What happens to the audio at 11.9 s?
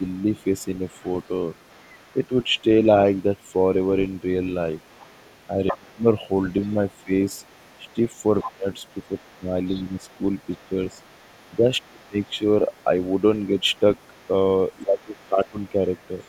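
Speech suppressed in double talk hits from 11.62 to 12.34 s. The speaker's voice ducks hard, dropping by something like 25 dB for a total of under half a second, likely because the echo canceller could not separate the speaker's voice from the overlapping far-end echo and attenuated both.

The other side's voice leaking through runs under this moment as it does across the whole recording: a faint second voice, roughly 35 dB below the speech, likely residual loudspeaker echo the canceller failed to subtract from the microphone signal.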